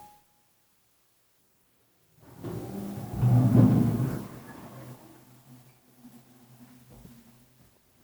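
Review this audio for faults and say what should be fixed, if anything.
Nothing needs fixing, as the signal holds steady throughout with no audible technical fault anywhere in the recording.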